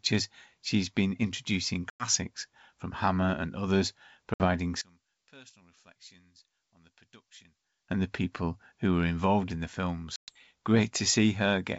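At 1.90 s, just after "she's been introducing", the speech drops into a hard-edged silent hole of about 100 ms. This is packet loss on an ADPCM call. When sound returns at 2.08 s, it comes back slightly distorted. The decoder's predictor and step size have drifted from the sender's and need a few tens of milliseconds to realign. The same happens after "and others" at 4.34 s (60 ms gone, recovering by 4.46 s). Unlike a plain dropout, the damage continues past the gap.

From 4.81 s to 7.88 s the speech falls by about 27 dB to a faint residue, with the centred voice almost cancelled. This is likely one channel inverted, heard summed to mono. It differs from a simple level drop because the body of the sound vanishes and only a faint remnant stays, while the wideband G.722 character is still heard around it.

At 10.16 s, after "were involved in the", another packet loss cuts about 120 ms. The speech resumes at 10.32 s slightly distorted before settling.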